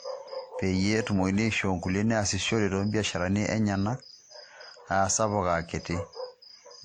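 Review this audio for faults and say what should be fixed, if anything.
Throughout the speech, two distinct sets of coding artefacts sit on top of each other, with content extending up to 20 kHz. This is likely transcoding between lossy codecs, consistent with a WMA encode followed by Opus, both around 48 kbit/s. To prevent it, encode to the final codec once, directly from a lossless source.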